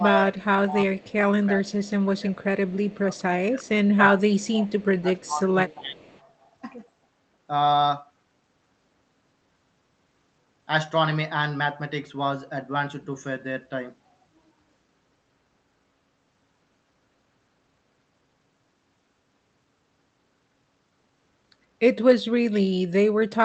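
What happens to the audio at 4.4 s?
At 4.4 s you're in speech suppressed in double talk, 2.92 to 4.71 s. The voice dips as much as about 20 dB, likely an echo canceller clamping down during overlap.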